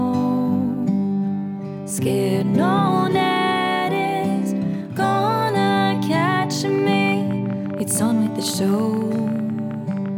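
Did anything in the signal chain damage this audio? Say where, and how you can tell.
Yes. From 6.69 s to 10.09 s there's a train of clicks, roughly fifty of them at about 14.4 per second, unevenly spaced. Each one has much the same sharp shape and lands at about the level of the sound itself, so they tick right over it. A repeating impulse like that is most likely interference coupling into the analogue wiring from nearby gear, or a faulty connection or power supply, rather than anything in the content.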